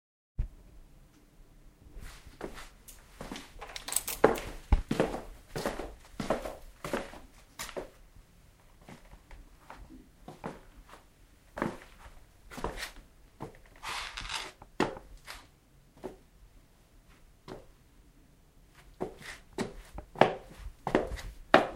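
No technical faults are audible.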